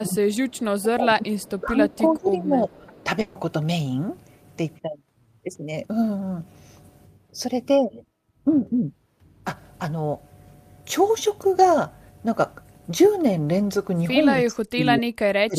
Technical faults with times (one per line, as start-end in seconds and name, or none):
0.28-0.64 echo leak
0.78-3.05 speech suppressed in double talk
1.42-1.97 echo leak
2.94-3.04 echo leak
3.21-3.37 burst of packet loss
14.36-15.58 speech suppressed in double talk